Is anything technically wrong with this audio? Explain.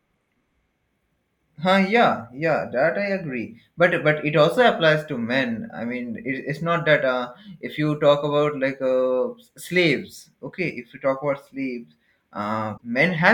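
Yes, there's one glitch near the end. From 12.74 to 12.81 s there's damaged data in the compressed stream: the decoder hits corrupt frames, loses sync and hunts for the next header, so you get a short chirp, squawk, click or hole.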